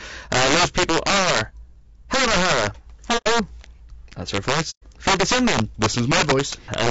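Throughout the clip, a gain stage in the speech path overflows instead of limiting. It is driven about 5 dB past its range, so a small share of samples on the loudest peaks exceed the largest integer and wrap to the opposite sign. Each one flips across the full range, producing a cracking, tearing distortion on those peaks. This is much sharper than ordinary clipping, because the waveform jumps instead of flattening.

Also throughout, the voice is rough and grainy, with noise filling the gaps between harmonics and a top band that sounds lowered or synthetic. The damage is plainly audible. The likely cause is low-delay AAC compression (AAC-ELD) at a low rate, consistent with about 32 kbps. It codes each short frame with too few bits, so fine spectral detail is replaced by coarse approximation.

From 3.17 to 3.27 s, AAC frame loss with muting opens a soft-edged hole of about 90 ms, which fits three lost frames. 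The decoder zeroed their spectrum, so the overlapping windows fade the sound out and back in rather than cutting it.

From 4.70 to 4.84 s, a longer gap of about 120 ms follows in the same way, consistent with four lost frames. It too fades out and in smoothly across the frame overlap.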